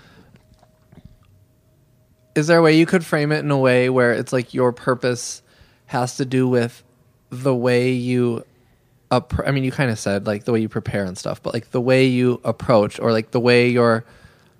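Nothing technical to flag here: it's a speech recording, and there isn't a fault to point to anywhere in it.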